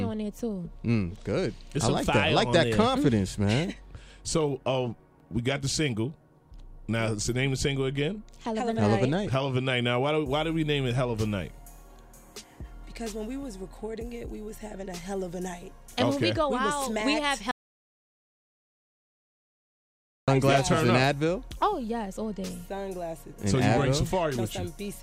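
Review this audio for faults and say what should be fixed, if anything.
At 17.51 s the sound cuts out mid-flow and stays fully silent, with no room tone, until 20.28 s, when it resumes abruptly. This audio dropout to silence loses about 2.76 s, likely because the input was disconnected, the link failed or a mute was triggered while recording continued. To prevent it, secure the connections and monitor the input signal throughout the recording.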